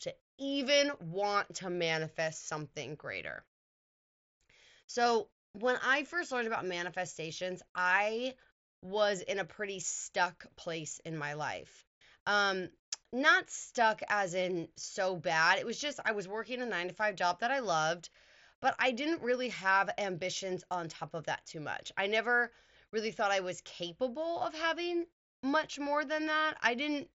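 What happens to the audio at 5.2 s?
Nothing goes wrong at 5.2 s: the speech carries on intact through the Bluetooth mSBC headset link, with its usual band limit just under 8 kHz and no dropout, click or other fault.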